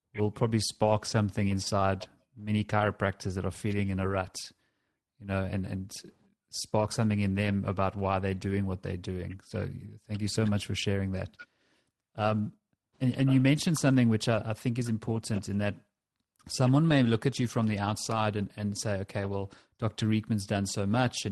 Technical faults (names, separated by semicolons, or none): none